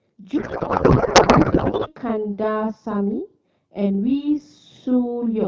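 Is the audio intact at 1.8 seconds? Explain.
No. At 1.8 s the audio sits inside a codec payload misread running from 0.37 to 1.93 s. Octet-aligned AMR frames are being parsed as bandwidth-efficient, so the speech becomes garbled noise and warble. Throughout the clip there is also a channel delay (doubling): one channel lags by 40 ms before the mono sum, producing a slap-like second copy at equal level.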